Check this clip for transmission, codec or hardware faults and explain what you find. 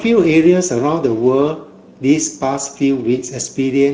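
One fault runs through the whole speech clip: Speex codec damage, plainly audible from start to end. The CELP coder has too few bits for the excitation, so the speech sounds hoarse and grainy, with a noisy edge. The sound points to a middle-quality setting of about 16.8 kbps. On a spectrogram, harmonics look smeared and noisy, and any energy above 4 kHz appears as a diffuse, shaped noise band instead of clear structure.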